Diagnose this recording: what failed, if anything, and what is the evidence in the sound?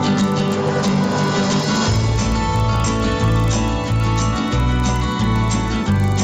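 The sample-rate conversion stage failed: the resampler restarted on every block. A steady 25 Hz tick runs throughout wherever there is signal, matching 40 ms blocks converted from 16 kHz to 48 kHz separately, so each block edge is interpolated without its true neighbouring samples.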